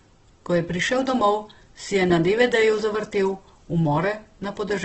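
Throughout the speech, nothing reaches above 8.1 kHz, and the remaining spectrum sounds rough and grainy, with noisy filler where detail should be. The heavy damage is likely Opus compression in its CELT mode, starved of bits, which fits a bitrate near 12 kbps.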